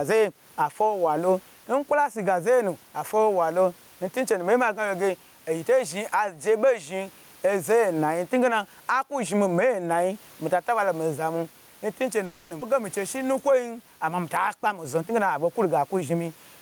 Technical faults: gain pumping; call audio freeze; skip ahead; jitter buffer slow-down; jitter buffer speed-up

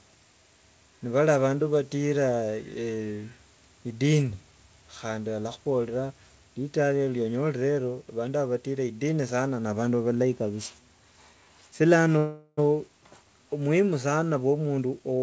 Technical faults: call audio freeze; jitter buffer speed-up

